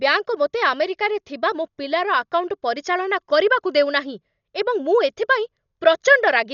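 Throughout, the speech sounds dull, with nothing above 6.9 kHz and rough, fluttering noise around tones. The cause is likely Dolby Digital compression at a low rate, around 48 kbps.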